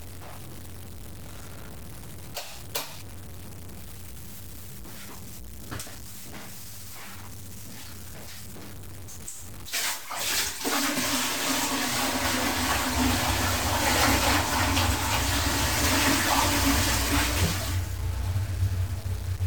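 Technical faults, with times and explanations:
Throughout, low bit depth without dither: the audio was likely truncated to about 6 bits, so grainy distortion tracks the sound, roughly 20 dB below it, and quiet sounds turn gritty.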